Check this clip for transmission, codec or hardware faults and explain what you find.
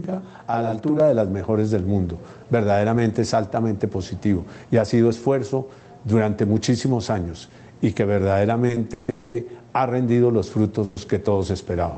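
Three kinds of fault appear, all in the sound carried over a call path whose roughly 8 kHz top end points to a low-rate Opus stream.

Channel delay (doubling), 0.0 to 1.0 s: one channel arrives about 42.7 ms late, which fits a 2048-sample buffer, and the two are summed to mono. The late copy lands at equal level as a tight slap. Unlike room echo, it has no decay and only one repeat.

Repeated stalls (stutter), 8.67 to 9.10 s: the jitter buffer ran dry four times, the longest for 150 ms. Each time it stretched the last sound, for about 190 ms in total, so nothing is lost, but the audio drags in a halting rhythm instead of stopping once.

Call audio freeze, 9.10 to 9.36 s and 10.84 to 10.98 s: the sound hangs as a fading buzz or hiss for 240 ms and then 120 ms before resuming exactly where it stopped. The likely cause is packets held up in transit. Each is a single held gap rather than a string of short hitches.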